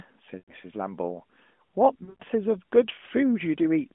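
At 0.38 to 0.54 s the narrowband speech loses about 100 ms to lost AMR speech frames, consistent with five consecutive 20 ms frames failing their checksum. The decoder holds the last good pitch and vocal tract settings at falling gain, so the sound smears and fades before recovering thinly. A second burst at 2.04 to 2.23 s removes about 140 ms scattered over 160 ms, with a longest run near 100 ms, giving broken, warbling dips.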